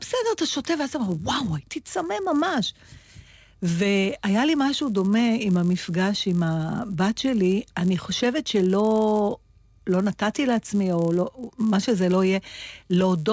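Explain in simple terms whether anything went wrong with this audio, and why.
The resampler restarted on every block: the audio was cut into 10 ms pieces, each converted from 44.1 kHz to 16 kHz on its own, leaving a tiny error at every seam. The seams repeat 100 times a second, so a buzz runs under the speech throughout.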